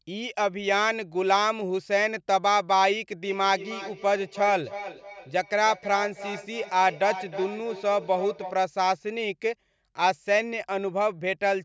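From 3.24 to 8.67 s there is feedback echo between two devices: one device plays the other's signal, its microphone picks it up again, and neither echo canceller removes it. The speech returns roughly every third of a second, thin and ringing, about 12 dB below the direct sound.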